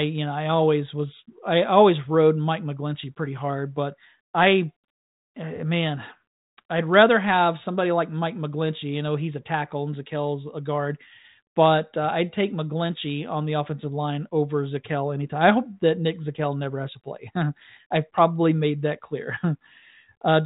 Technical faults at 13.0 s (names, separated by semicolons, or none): none